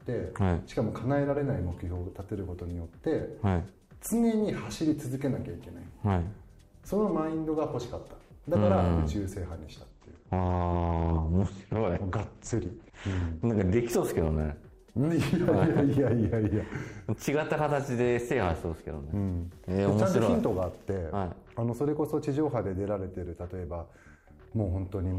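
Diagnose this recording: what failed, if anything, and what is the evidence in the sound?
From 9.90 to 13.90 s the top end abruptly vanishes above 8.7 kHz with no gap: an adaptive stream at a lower bitrate, consistent with the network forcing a drop from about 64 to 16 kbit/s Opus.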